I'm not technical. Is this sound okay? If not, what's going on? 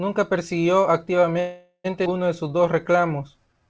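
No. From 1.40 to 1.86 s the speech freezes into a fading buzz with a brief silence. This call audio freeze was likely caused by delayed network packets.

At 2.04 to 2.07 s it skips ahead. About a third of a second of speech is dropped, and the two sides are joined almost directly.

From 2.44 to 3.68 s a jitter buffer slow-down stretches the speech to 91% speed at the same pitch, adding about 0.12 s to rebuild its reserve.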